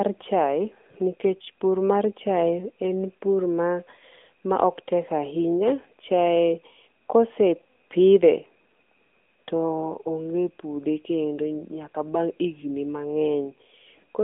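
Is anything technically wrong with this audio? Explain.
Yes. Throughout the speech, the audio has passed through the AMR narrowband mobile codec, the AMR-NB speech coder. It models the vocal tract from a few pulses per frame within a 200 Hz to 3.5 kHz line band, consistent with a mid-rate mode near 10 kbps. Nothing above 3.7 kHz survives, and the buzzy, synthetic coding damage is plainly audible.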